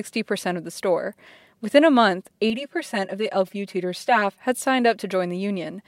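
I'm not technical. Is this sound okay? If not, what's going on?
No. From 2.50 to 4.40 s, after "a month" and before "had signed", there is channel delay (comb filtering). One side runs about 5 milliseconds late. This makes the speech sound hollow and thin.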